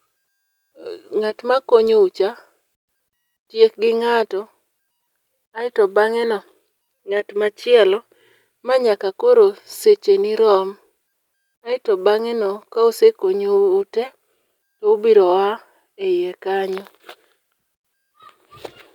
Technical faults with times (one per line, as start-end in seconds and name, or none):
none